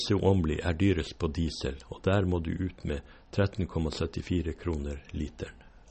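An encoder short of bits, likely MP3 compression at a low rate around 32 kbps, cuts everything above 8.4 kHz and drops weak frequency lines frame to frame throughout the speech, leaving it dull, watery and swirly, with chirpy s sounds and smeared attacks.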